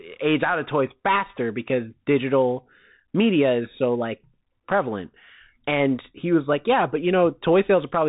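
Speech passed through a Bluetooth CVSD headset codec for its whole length, its one-bit delta coding pointing to a 64 kbps link. Nothing above 3.8 kHz survives, s sounds turn scratchy, and granular hiss sits beneath.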